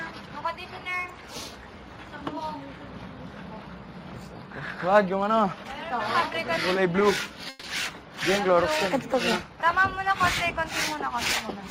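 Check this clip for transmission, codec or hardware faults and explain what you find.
One transmission fault: repeated stalls (stutter) from 6.55 to 7.65 s. The jitter buffer ran dry five times as packets arrived late, and the receiver stretched the last sound for about 180 ms in all, up to 140 ms per wait. The audio drags and hiccups. Unlike packet loss, nothing is cut out; the sound is delayed, not missing.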